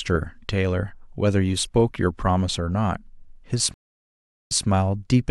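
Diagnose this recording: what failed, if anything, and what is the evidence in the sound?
Stream reconnect at the network stage: speech drops to silence for 0.76 s at 3.74 s, then a fresh decoder resumes 0.16 s earlier, repeating sound.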